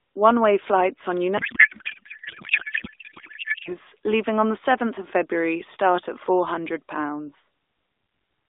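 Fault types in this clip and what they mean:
Codec payload misread: octet-aligned AMR frames decoded as bandwidth-efficient, so after "way flights on" the speech turns to garbled warble until "leaving on the".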